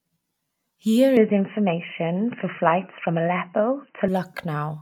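Input switched to a poorer device, from 1.17 s to 4.08 s: the speech abruptly turns dull and boxy, with nothing above 3 kHz. The level shifts by roughly 5 dB, and a faint new background noise appears well below the voice. There is no gap at the change. The likely cause is the recording input jumping to a narrower-band microphone or headset call profile, then returning to the original device at 4.08 s.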